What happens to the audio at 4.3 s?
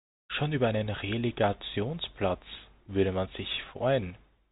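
Nothing goes wrong at 4.3 s; the speech carries straight through that moment intact, with only the usual telephone band limit of G.711 coding, which cuts everything above about 3.8 kHz.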